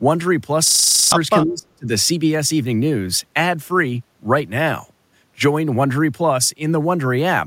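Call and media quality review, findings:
System hang loop, 0.68 to 1.12 s. A 40 ms segment repeats 11 times, giving a 25 Hz buzz. Driver stalled while the hardware replayed its ring buffer. Nearly half a second of audio lost.

Speech suppressed in double talk, 1.44 to 1.88 s. Speech drops by up to about 40 dB. Likely the echo canceller mistook near-end talk for echo during simultaneous talk.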